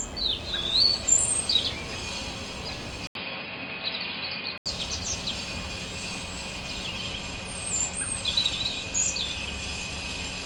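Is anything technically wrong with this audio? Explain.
Yes. From 3.07 to 4.66 s the input likely switched to a poorer device: after a brief 80 ms silence the sound dulls, losing everything above 5 kHz, with a faint new noise floor well under the signal but little level change, before clearing up again.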